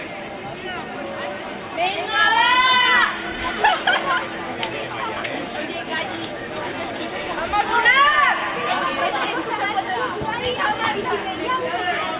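Nothing is technically wrong with the audio in this clip, so there are no fault times or causes to give.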